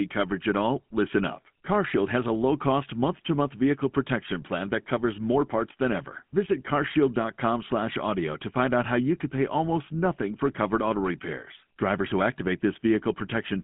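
From start to finish this speech sits behind the GSM full-rate codec, and it's plainly audible. The codec rebuilds the voice from a vocal-tract model fed by a coarse, regularly spaced pulse excitation, so everything picks up that buzzy, gravelly grain, which fits the old 13 kbps full-rate scheme. The band is phone-narrow, roughly 150 Hz to 3.4 kHz, and nothing survives above about 3.8 kHz, so sibilants come out dull and boxy.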